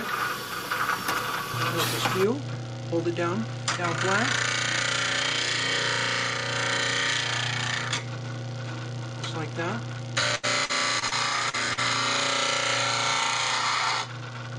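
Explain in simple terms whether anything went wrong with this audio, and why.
Between 10.35 and 11.13 s there is repeated packet loss, which gives a robotic sound. Four pieces of audio failed to arrive, about 180 ms in total, the longest 78 ms. The receiver filled each hole by stretching the last sound, so nearly a quarter of that stretch is patched and sounds choppy and machine-like.

Right after, there are two brief cases of short concealed packet loss, at 11.49 to 11.55 s and 11.73 to 11.79 s. Each lost about 40 ms, and the patch over it comes across as a quick smear or wobble in the sound.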